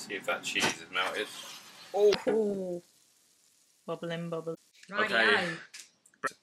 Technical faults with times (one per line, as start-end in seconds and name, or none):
2.11-2.15 damaged data in a compressed stream
4.53-4.56 damaged data in a compressed stream
6.23-6.29 damaged data in a compressed stream